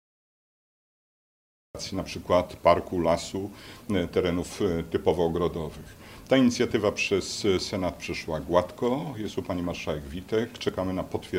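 A cut-off start runs from 0.00 to 1.75 s: the clip opens on digital silence, and at 1.75 s the audio appears abruptly, already partway through a sound rather than building up from a natural onset. The capture or stream evidently began after the source was already playing, so the opening portion of that sound was never recorded, and what remains enters with its attack missing.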